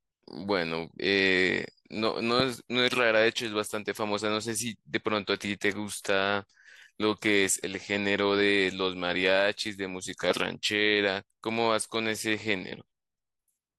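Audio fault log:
2.40–2.42 s and 10.31–10.33 s, loud pop: a single sharp click-thump each time, peaking around 15 dB above the speech, which runs on beneath it. A sudden voltage step, likely from a plug, switch, static discharge or driver glitch, was added to the signal.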